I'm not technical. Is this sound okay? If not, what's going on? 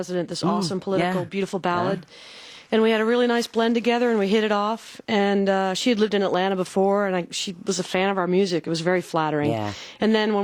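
Yes, nothing wrong can be heard anywhere in this sound, so there's nothing to fix.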